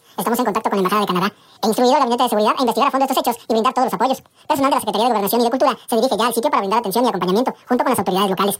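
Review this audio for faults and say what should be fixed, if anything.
Audio read two samples at a time (double speed) runs through the whole clip. Each pair of samples is taken as one frame, so everything plays at 2x speed, an octave higher. Match the reader's channel count and sample width to the stream's actual format.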